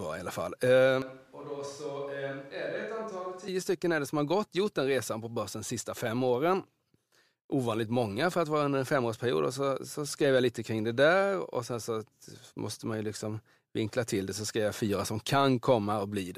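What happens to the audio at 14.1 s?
Nothing goes wrong at 14.1 s: the speech carries on intact through that moment, with no dropout, click, glitch or other fault to be heard.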